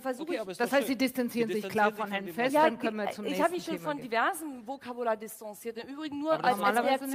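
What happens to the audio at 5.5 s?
Nothing goes wrong at 5.5 s; the audio plays through that moment intact, with no dropout, click, glitch or other fault.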